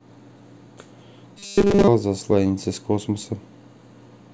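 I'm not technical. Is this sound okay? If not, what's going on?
No. From 1.39 to 1.88 s, the speech becomes a metallic 200 Hz buzz. This is robotic sound from repeated short buffers, likely tiny 5 ms pieces replayed.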